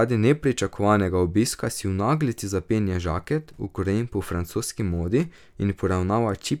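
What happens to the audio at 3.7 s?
Nothing goes wrong at 3.7 s: the speech carries on intact through that moment, with no audible fault.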